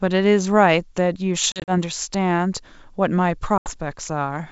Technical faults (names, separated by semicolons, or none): packet loss on an ADPCM call